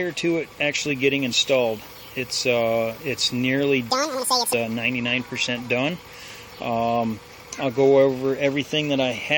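From 3.90 to 4.53 s there's a stretch where the audio was read two samples at a time, so it plays at double speed. The reader treated each pair of samples as a single frame, as if the stream were two channels or twice as wide, so it got through the material twice as fast. You hear that short section rushed along at 2x and jumped up a full octave, 12 semitones, before things drop back to normal pitch and pace.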